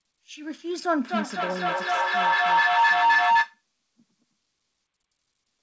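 From 1.08 to 3.64 s a feedback howl builds near 1 kHz, pulsing about every 300 ms and peaking about 9 dB above the speech. Unlike an echo, its repeats swell rather than fade.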